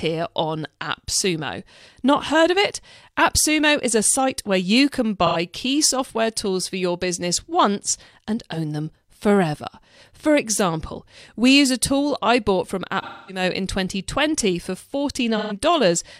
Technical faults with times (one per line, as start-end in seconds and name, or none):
5.26-5.36 AAC frame loss with concealment
13.02-13.43 AAC frame loss with concealment
15.37-15.55 AAC frame loss with concealment